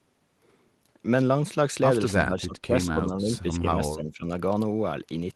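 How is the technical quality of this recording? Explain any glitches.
The speech dips twice, from 2.23 to 3.77 s by about 15 dB and from 3.95 to 4.3 s by about 10 dB, likely speech suppressed in double talk: an echo canceller unable to separate the local talker from overlapping far-end echo, turning both down. The voice thins and drops out, with the waveform envelope and upper spectrogram bands visibly hollowed.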